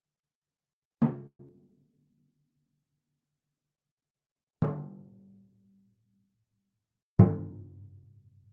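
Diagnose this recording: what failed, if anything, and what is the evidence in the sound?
A call audio freeze occurs at the network and jitter buffer stage from 1.26 to 1.40 s. The sound is continued as a fading fill, then about 70 ms of silence. Delayed packets likely emptied the buffer. Nothing is lost.

A skip ahead follows at 1.47 to 1.50 s, in transit or at the jitter buffer. About a tenth of a second of audio is dropped. The two sides join almost directly.

A jitter buffer slow-down runs from 1.70 to 2.22 s. Repeated pitch periods add 64 ms. Playback drops to 89% speed at unchanged pitch, drawing the sound out.

A jitter buffer speed-up runs from 6.79 to 8.26 s. Short pieces are cut, totalling about a tenth of a second. The audio plays at 107% speed, same pitch, and sounds hurried.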